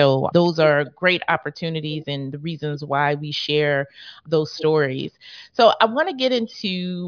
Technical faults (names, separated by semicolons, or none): none